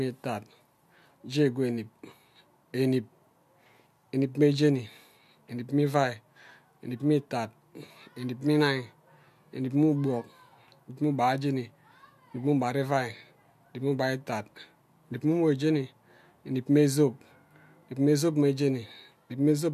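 Speech, with no technical faults to report.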